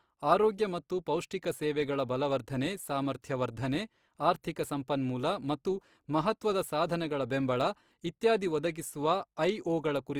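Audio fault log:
throughout, Opus compression: speech turns plainly rough and grainy, likely from Opus music-mode coding at a rate fitting 24 kbps. Starved bands are refilled with noise or folded content, so a spectrogram shows few holes and hazy harmonics, and nothing above 20.4 kHz.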